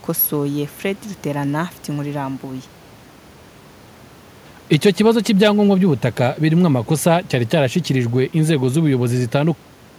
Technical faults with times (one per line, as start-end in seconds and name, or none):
none